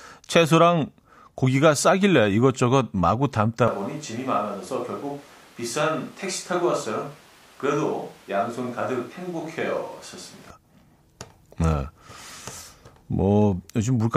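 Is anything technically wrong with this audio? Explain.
Yes. From 3.68 s to 10.50 s the speech abruptly turns roomy and hollow, then snaps back just as suddenly. This is a switch to a distant microphone: the close mic's signal was likely lost or left out for that stretch, so a mic further from the talker carried the speech. Distance thins the bass and lets room reflections dominate, and the greater distance also drops the section by about 5 dB, and room noise rises to roughly 25 dB below the speech.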